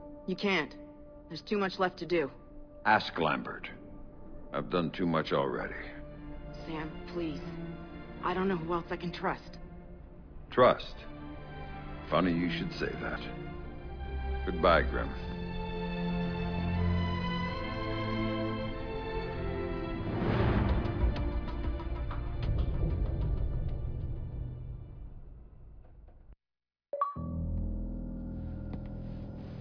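Nothing stood out as a technical fault anywhere in the audio on listening.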